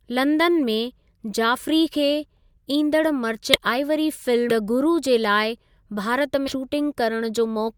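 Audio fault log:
3.53–3.58 s, 4.49–4.54 s, 6.47–6.53 s: compressed frames skipped. Speech jumps ahead about 0.2 s, then roughly 0.7 s, then 0.2 s, consistent with lost 20 ms codec frames. The spectrogram shows abrupt harmonic discontinuities, and the waveform shows envelope jumps.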